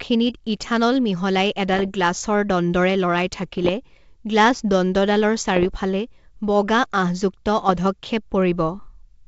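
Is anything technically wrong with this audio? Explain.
Yes. The speech carries bit errors on an ADPCM link, in four short bursts: 1.74 to 1.91 s, 3.43 to 3.70 s, 5.56 to 5.70 s, and 7.60 to 7.88 s. Flipped bits corrupt the coded samples. Each one also knocks the decoder's step size and prediction off track, so the damage lingers briefly rather than clicking once. The result is pops and gritty, rough patches with quick jumps in level. The error rate is under one percent, densest in the first burst. The wideband G.722 coding underneath keeps its clear top end.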